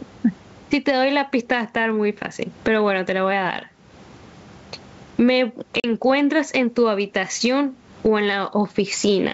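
Gain pumping runs through this whole speech recording: the gain ducks by around 20 dB as each loud syllable arrives, so loud and quiet passages sit squashed close together in level. The likely cause is input gain set far too high for the microphone, with a fast limiter or compressor clamping down on every peak and releasing in the gaps. Packet loss on an ADPCM call appears from 5.80 to 5.85 s as a hard-edged hole of about 40 ms, which fits roughly two lost packets filled with silence. Because ADPCM sends only differences from a prediction, the decoder's adaptive predictor and step size lose track of the sender's during the dropout, so the speech re-enters slightly distorted before the two sides resynchronise over the next few tens of milliseconds. The band-limited character, clear up to about 7 kHz, is consistent with G.722 wideband telephone coding at its top rate.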